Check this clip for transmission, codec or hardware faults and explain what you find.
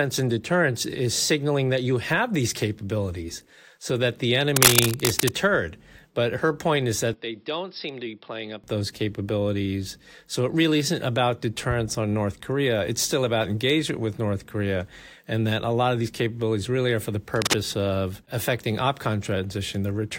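Two kinds of fault turn up in this speech clip: scratchy bursts at two points and a brief drop to a poorer microphone.

Cable scratch noise hits from 4.56 to 5.29 s, after "capabilities so that the", a bit louder than the speech, and again from 17.34 to 17.57 s, between "really are for the" and "of affecting", at roughly speech level. Both sound like rough rustling, likely from a worn cable or connector whose contact was jostled.

Input switched to a poorer device runs from 7.14 to 8.64 s, between "her point is" and "those capabilities". With no gap, the sound goes dull, loses everything above 5.4 kHz, drops about 10 dB and picks up a faint new hiss, likely a fallback to a lesser mic.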